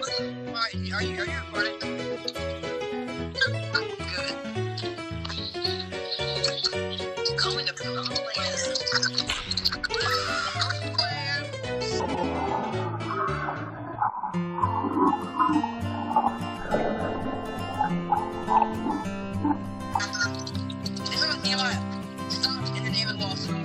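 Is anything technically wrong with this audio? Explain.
Yes. At 2.15–2.35, 12.05–12.24, 13.76–13.96 and 17.15–17.35 s, a roughly 0.2 s stretch flutters. These are frames out of order: two adjacent blocks of about 93 ms each, which fits runs of four frames, play swapped, with no time lost.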